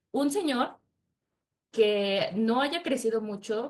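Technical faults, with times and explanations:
No technical faults can be heard in this speech clip. There is nothing to mark at any point.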